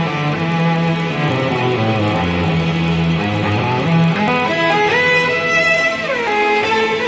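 Throughout the clip, a buzz at 25 Hz rides on the sound: the resampler restarted on every block. Each 40 ms block was converted in isolation, which fits a change from 44.1 kHz to 16 kHz, leaving a small error at every block edge.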